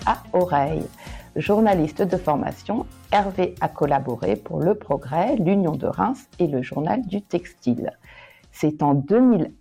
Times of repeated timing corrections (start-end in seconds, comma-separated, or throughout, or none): none